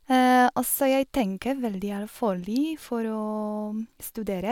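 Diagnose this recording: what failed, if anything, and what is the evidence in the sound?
Nothing failed; no stage in the chain shows trouble.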